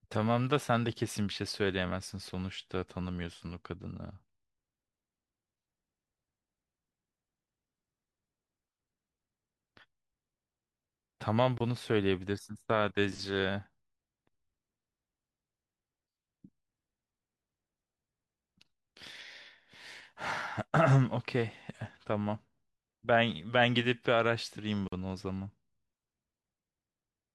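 A gap at a join of encoded pieces opens at 11.58 to 11.60 s, about 24 ms long, and again at 24.88 to 24.92 s, about 45 ms. The speech was encoded in separate segments that were then butted together untrimmed, so each join keeps the encoder's leading delay and the padded final frame. The speech drops out abruptly, with edges softened by the codec, then resumes exactly where it left off.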